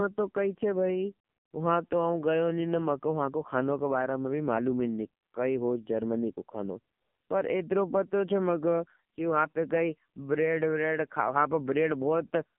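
Throughout, the speech carries heavy AMR narrowband mobile codec damage: band-limited to about 150 Hz–3.4 kHz, buzzy and synthetic, consistent with a low mode near 5.9 kbps.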